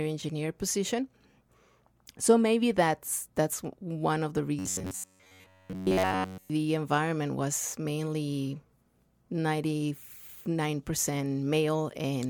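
Just after "that's one of the", from 4.59 to 6.50 s, the speech collapses into a rigid, metallic buzz near 94 Hz that still roughly tracks the words until "environment was mainly" resumes. This is robotic sound from repeated short buffers, likely caused by audio arriving too seldom so that a segment of about 10.7 ms is looped over essentially the whole stretch. A spectrogram shows flat, evenly spaced harmonic lines at multiples of 94 Hz, and the waveform shows identical short cycles repeating.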